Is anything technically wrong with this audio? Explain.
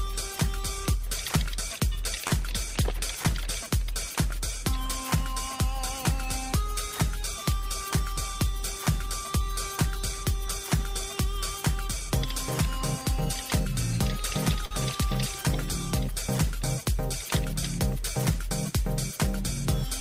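Yes. Two short stalls from a late packet occur, at 2.27 s (about 33 ms) and 14.65 s (about 54 ms). The jitter buffer emptied, so the last sound was held with a faint buzz or dip before playback resumed without loss.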